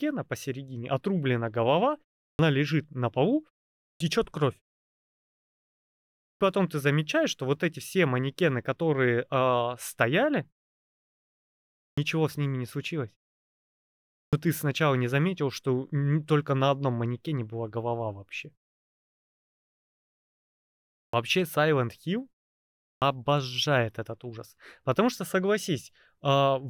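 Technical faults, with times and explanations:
2.30, 3.91, 6.30, 11.88, 14.23, 21.03 and 22.93 s: clipped start after a pause. The output device sleeps through silences of 0.34 to 2.54 s and needs 88 to 107 ms to wake, so each restart loses its first sounds and begins abruptly, as just before "лежит на полу", "ты замечаешь что вот" and "ты сначала не заметил".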